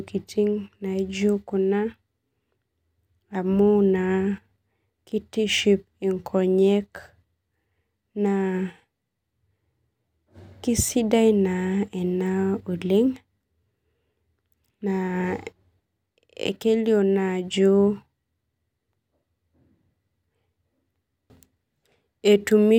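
Nothing technically wrong turns up in this speech recording; there's simply no fault to point to anywhere along its run.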